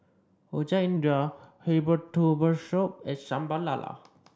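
From 0.97 to 2.12 s the speech slows by 6.4% and drops 114 cents, just over a semitone, then snaps back. This is likely a drift correction step from clock-matching software; unlike wow, speed and pitch move together in one flat step rather than wavering.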